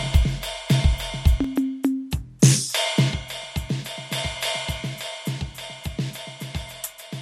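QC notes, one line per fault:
1.44 s to the end: input switched to a poorer device, likely. At 1.44 s the music abruptly loses its top end and turns duller, with no gap at the change. Nothing above 13 kHz remains, and the level drops a few dB, with faint new background noise sitting about 45 dB beneath the music. On a spectrogram, energy above 13 kHz cuts off sharply at 1.44 s and a new noise floor appears. On the waveform, the envelope shrinks slightly at the same point.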